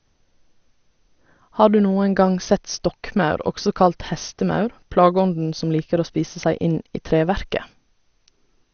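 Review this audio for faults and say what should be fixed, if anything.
The speech was likely passed through MP2 compression with too few bits, which fits a bitrate near 48 kbps. Short of bits, the encoder switches off its upper sub-bands, so nothing remains above about 6.5 kHz, and the surviving bands are coarsely quantised and flicker on and off. Throughout the clip this sounds dull, with a plainly audible gurgling, granular distortion. Encoding at a higher bitrate, or with a more efficient codec, would prevent it.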